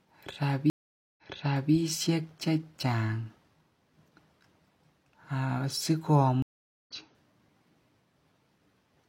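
Speech with two stream reconnects, where the connection dropped and a fresh decoder restarted mid-stream: at 0.70 to 1.73 s a 476 ms blank gap appears on the spectrogram and waveform, then the audio replays 557 ms earlier; at 6.42 to 6.91 s a 440 ms silence resumes about 0.4 s later.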